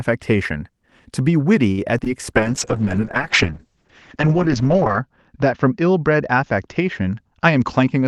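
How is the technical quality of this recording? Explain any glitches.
The recording has clear network-related faults in its first half and degraded coding quality from about 2.4 s to the end.

Short stall from a late packet, 1.71–1.80 s: a packet arrived late and the jitter buffer ran dry, so the receiver held the last sound for about 63 ms before resuming from the same point. Nothing is lost, but the sound hangs briefly. On a spectrogram this shows as horizontally smeared, frozen harmonics. The waveform shows a repetitive, looping stretch.

Short concealed packet loss, 1.98–2.00 s and 2.04–2.08 s: two 20 ms chunks never reached the decoder, and concealment extended the preceding sound into each gap before blending back. Each gap is heard as a quick smear or wobble. On a spectrogram there is a brief blurred patch, and the waveform has a slightly wrong-shaped segment at each gap.

Call bitrate drop, 2.37 s to the end: the encoder was pushed to a much lower rate, which fits a fall from about 32 to about 7 kbps, with the lowest level lasting about 2.6 s. 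The audio turns rough and watery, and the top end is cut from 12 kHz to 8 kHz. On a spectrogram this is a flat ceiling at 8 kHz with patchy, grainy energy below it.

Jitter buffer speed-up, 7.39–8.04 s: the buffer had built up excess delay, so the receiver repeatedly cut out pitch-period slices, removing roughly a twentieth of a second in total. The speech runs about 7% fast at unchanged pitch and sounds slightly hurried. The waveform shows whole periods dropped out, with tiny splice points.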